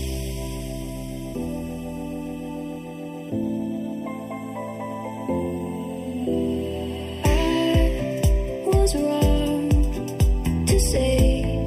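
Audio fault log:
Throughout, channel delay (comb filtering): one channel lags the other by roughly 0.4 ms, and the mono sum cancels shared content at evenly spaced frequencies, the first near 1.5 kHz. The fixed notches leave the sound hollow and phasey across the clip.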